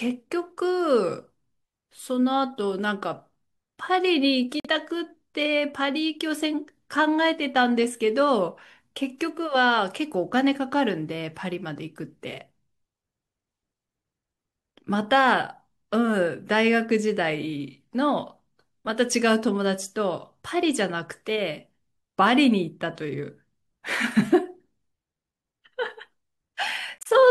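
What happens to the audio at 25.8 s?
Nothing goes wrong at 25.8 s; the speech carries on intact through that moment.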